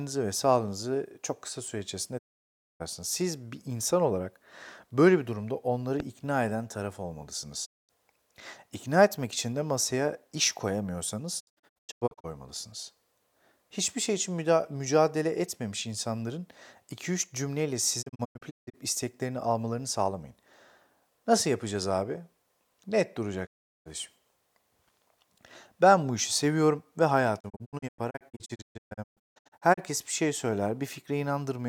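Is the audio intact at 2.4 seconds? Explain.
No. At 2.4 seconds the speech sits inside a digital broadcast dropout running from about 2.17 to 2.82 s, just after "sağlığınızı çok kısa süre". The receiver stopped getting usable frames and muted until clean ones arrived again, so roughly 0.6 s of programme is simply gone. The sound fades out over about 20 ms rather than clicking off, leaves a hole of silence, then resumes mid-programme. The length of the gap fits a run of lost frames.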